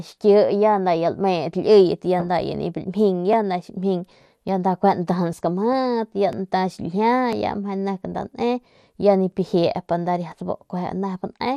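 The speech is muffled throughout, with a gurgling, granular edge, likely from MP2 compression at a rate that fits about 80 kbps. Starved sub-bands drop out, so a spectrogram shows the upper bands missing or flickering in blocky patches, and the remaining content looks coarsely quantised.

From 3.33 s to 10.32 s, periodic USB or driver dropouts produce a regular tick roughly once per second (every 1.0 s). Each one skips a couple of milliseconds of audio without filling the gap. On the waveform these appear as small discontinuities where the signal jumps, and on the spectrogram as thin vertical broadband lines at evenly spaced intervals.

From 7.99 s to 8.24 s, DAB burbling adds a quarter-second of short noise blips. Bit errors at a low rate, around a fifth of a percent, corrupt samples, so a spectrogram shows short blips of noise in single sub-bands.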